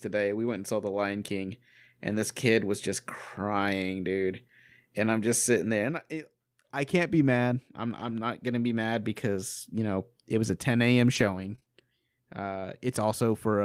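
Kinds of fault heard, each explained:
Lost packet rebuilt from error correction: Around 2.11 to 2.21 s the speech turns briefly rougher and noisier, with no break in the sound. About 60 ms of audio, which fits three separate lost packets, was lost in transit. The packet after each loss carried a low-bitrate backup copy of it, using Opus in-band forward error correction, and the decoder played those copies. The lower quality of the copies accounts for the coarse texture.
Scattered short gaps: Between 7.99 and 11.68 s there are a few brief ticks, smears and small hiccups. Elsewhere in that stretch the speech stays clear. About 60 ms of audio went missing there, spread over roughly three separate holes, the longest around 30 ms. Each hole points to packets that were lost or arrived too late. The receiver filled each one by extending the sound just before it, which produces those short smeared blips.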